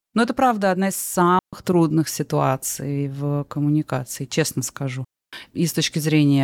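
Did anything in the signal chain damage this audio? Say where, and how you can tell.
Yes. The digital wireless link drops out at 1.39–1.53 s and 5.05–5.33 s. Each is a clean mute of about 140 and 280 ms, with no noise burst around it.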